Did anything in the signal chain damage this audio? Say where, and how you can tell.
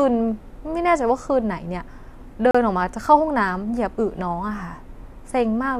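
Yes. The damage comes at the playback stage, from a gap between stream segments at 2.51 to 2.55 s. For about 35 ms the speech stops dead, with hard edges on both sides. Two adjacent segments' time stamps don't meet, so the player fills the hole with silence. Nothing is lost, but the timeline is stretched. On a waveform it is a flat silent slot with abrupt cuts; a spectrogram shows a clean vertical blank across all frequencies.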